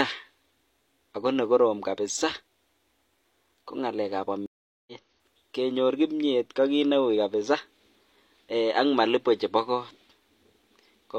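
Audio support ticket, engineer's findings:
Stream reconnect at 4.46–4.92 s. Connection dropped; player went silent for 407 ms, reconnected, started a fresh decoder mid-stream. Speech resumes at a later point, skipping roughly 0.4 s of content, consistent with a live stream picking up from the current position rather than buffered data. Probable component: network transport/player reconnect logic. Audible as an abrupt gap with a jump forward in the speech, not a pause.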